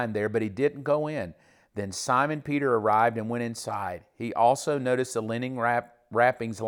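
Speech, with nothing technically wrong to report: no fault can be heard anywhere in the recording.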